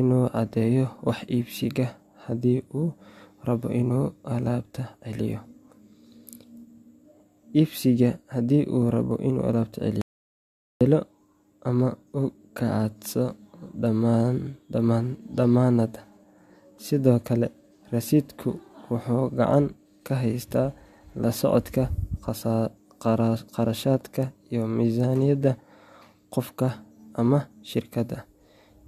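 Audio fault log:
10.01–10.81 s, audio dropout to silence: the speech cuts abruptly to silence for 0.79 s with no room tone, unlike a gate or fade, likely from a lost input link.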